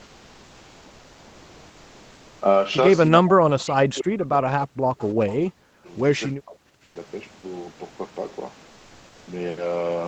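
From the start to 2.41 s, the background sounds steady and featureless, about 2 dB quieter than the real room tone. This is likely comfort noise in place of the background, generated while Opus DTX paused transmission.

From 3.2 to 4.86 s, the speech dips by as much as about 40 dB, with the same happening at 5.37 to 5.83 s and 6.4 to 6.59 s. This is likely speech suppressed in double talk: the echo canceller turned down the talker along with the echo while both sides spoke.

Faint scraps of voice trail the speech by 323 ms at 3.59 to 3.63, 4.98 to 5.06, 5.27 to 5.34 and 5.85 to 5.89 s, sitting about 20 to 35 dB below the speech. This is likely echo leak, where loudspeaker sound the echo canceller missed was sent back.

Comfort noise returns at 6.83 to 6.95 s, about 9 dB quieter than the real background, and again at 8.67 to 9.27 s, about 2 dB quieter.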